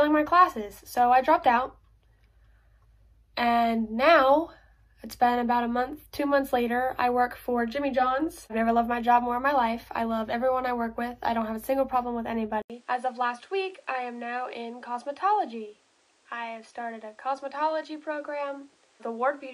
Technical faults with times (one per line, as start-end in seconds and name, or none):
12.62-19.53 input switched to a poorer device